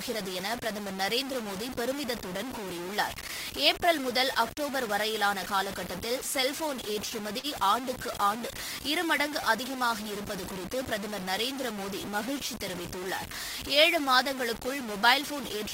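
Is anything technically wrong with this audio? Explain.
Yes, four faults are audible in this speech clip.

Throughout, the speech is grainy and harsh, with distortion that tracks the signal about 10 dB down, likely from low bit depth without dither, truncated to 5 bits.

From 6.63 to 7.46 s there are repeated stalls (stutter): the jitter buffer ran dry five times, extending sound for 79 ms total, longest 46 ms, so speech drags.

Scattered short gaps occur between 8.07 and 10.32 s: about seven lost or late packets, each patched with roughly 15 ms or less of continued sound, leaving brief ticks and smears.

From 13.96 to 15.33 s a jitter buffer speed-up trims pitch periods, roughly 50 ms in all, so speech runs at 103% speed at unchanged pitch.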